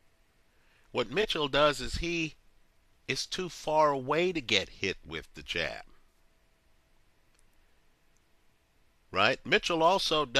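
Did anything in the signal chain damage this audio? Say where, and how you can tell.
Yes, at the codec: corrupt frame concealed at 1.22–1.25 s and 6.10–6.15 s, where the AAC decoder muted or smeared damaged frames.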